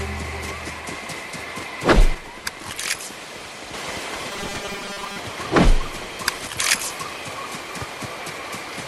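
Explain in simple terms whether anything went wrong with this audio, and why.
Yes, two kinds of problems can be heard.

One channel drops out from 2.15 to 3.74 s, and again briefly from 6.47 to 6.58 s. The sound suddenly gets noticeably quieter and then jumps back. The likely cause is that one side of a stereo recording went missing while both sides were being combined into one. Unlike a gradual fade or a volume change, the drop is instant. Anything that existed only on the missing side would vanish entirely, not just get quieter.

Robotic sound from repeated short buffers appears from 4.31 to 5.18 s. The audio takes on a rigid, metallic buzz fixed at 200 Hz. This likely happened because fresh audio arrived too slowly, so the playback filled the gaps by repeating a tiny chunk over and over. The 200 Hz buzz fits a chunk about 5 ms long, and roughly half of the sound in that stretch is repeated material. 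What sets it apart from ordinary dropouts or clicks is the steady, unchanging pitch that overlays the sound.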